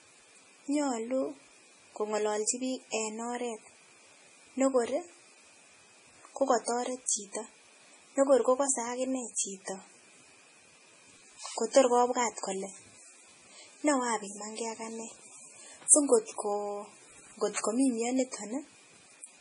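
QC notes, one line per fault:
Throughout: MP3 compression, likely the cause of the watery, swirly speech, heavily damaged, consistent with a very low bitrate around 24 kbps. Nothing survives above 10.6 kHz, a flat ceiling on the spectrogram. Weak frequency lines flicker on and off between frames, leaving speckled holes, and s sounds chirp metallically.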